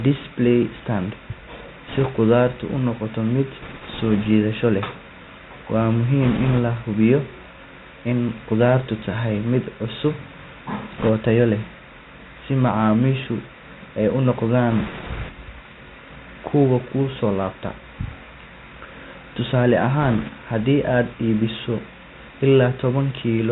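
Throughout, the speech carries the sound of the Bluetooth CVSD headset codec, a one-bit delta modulator running at a rate consistent with 64 kbps. Nothing above 4 kHz survives. Loud, bright passages outrun the adaptive step and grate, s sounds turn scratchy, and a granular hiss sits underneath. That hiss and grit set it apart from a simple band-limit.

Bit errors on a Bluetooth voice link break in at 1.88–2.07 s, 3.62–4.27 s, 6.22–6.59 s, 10.98–11.10 s, 14.71–15.30 s and 20.02–20.30 s. Each flipped bit nudges the waveform only slightly and the damage fades quickly, so these bursts add a rushing crackle rather than loud clicks or gaps. This is what distinguishes them from packet dropouts. The crackle is densest at 6.22 s and 10.98 s, where the error rate approaches 5 percent.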